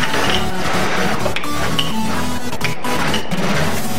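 From start to end, the waveform sits on a DC offset of about -17 dBFS, a constant shift away from zero. It adds nothing audible, but it shows as fixed energy at 0 Hz and uses up headroom, bringing clipping closer on one polarity.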